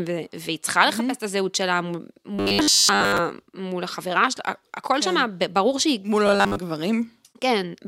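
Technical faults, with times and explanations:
2.35–3.19 s and 6.27–6.58 s, robotic sound from repeated short buffers: the speech flattens into a stiff, metallic 100 Hz buzz that only loosely follows the syllables. The likely cause is audio arriving too slowly, so a 10 ms slice is looped in place of most of the real signal.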